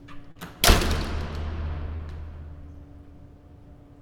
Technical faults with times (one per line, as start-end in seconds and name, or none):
0.31-0.37 short concealed packet loss
1.97-2.01 short concealed packet loss